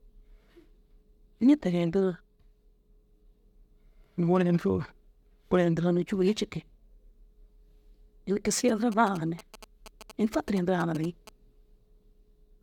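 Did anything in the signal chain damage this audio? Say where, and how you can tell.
Yes. GSM signalling bursts from 8.68 to 11.29 s: the analogue wiring rectifies a nearby phone's radio into galloping 217 Hz buzz groups, gated rather than steady like mains hum.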